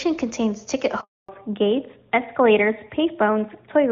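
A short speech recording with a handover gap and a drop to narrowband right after it. Up to about 1.0 s it's wideband HD Voice, with the crisp top end you'd expect from AMR-WB at a high rate, something like 23.85 kbit/s by the sound of it. At 1.01 s the sound dies away within a few tens of milliseconds and stays silent until 1.29 s, a 280 ms hole where nothing got through while the phone switched the call between networks. Whatever was said in that stretch is simply gone. When the audio returns at 1.29 s it has fallen back to narrowband, and it stays that way to the end. Nothing above 4 kHz survives, so the sibilants and air are cut off and the sound comes out duller and a bit rougher. That's the new link coming up on an older narrowband codec, consistent with AMR-NB at 12.2 kbit/s, instead of carrying on with AMR-WB.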